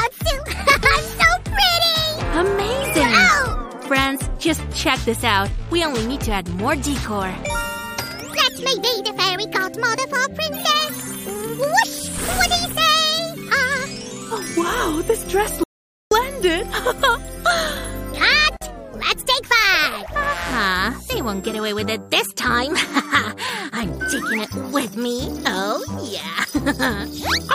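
At 15.64 s the sound cuts off abruptly into an audio dropout to silence lasting about 0.48 s, until 16.11 s. The gap is silent with no room tone, likely from the input being lost while recording continued, and that stretch of audio is missing.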